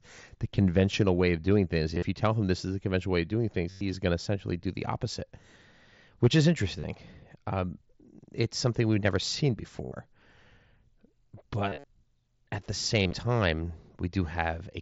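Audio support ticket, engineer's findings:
Concealed Bluetooth headset packet loss, six short buzzy holds in the speech: 1.95 s, 3.70 s (after "conventional way of doing"), 6.80 s (after "which is"), 9.85 s (after "something we've never seen"), 11.69 s and 13.01 s, lasting about 40 to 150 ms. The receiver loops the best-matching stretch of the last 20 ms or so of waveform at full level, with a slight warble on recovery. Unlike plain dropouts, there are no silent gaps. At 11.69 s, scattered losses span 150 ms.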